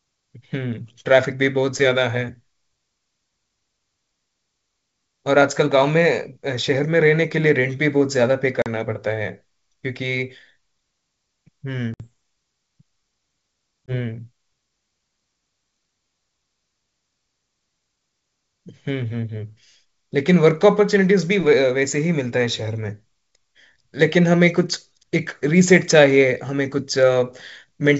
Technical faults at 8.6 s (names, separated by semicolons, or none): packet loss on an ADPCM call